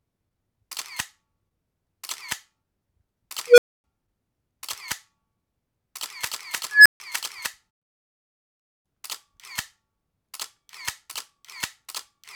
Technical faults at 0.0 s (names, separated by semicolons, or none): none